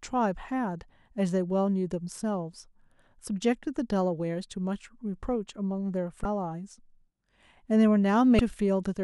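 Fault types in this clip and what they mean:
Damaged data in a compressed stream: corrupted bytes make the decoder misread frames and lose sync, leaving two brief 34 ms blips in the speech, at 6.22 s and 8.36 s.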